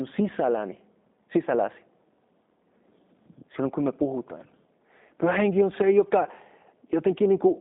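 From start to finish the speech carries G.729 codec damage, plainly audible. Nothing passes above about 3.8 kHz, and the line band sits roughly between 200 Hz and 3.7 kHz. Each frame is rebuilt from a vocal tract model and a few pulses, not sent as a waveform, so voices come out slightly rough and synthetic, which fits an 8 kbit/s G.729A coder. Plain band-limiting would dull the sound without that buzzy, rebuilt texture.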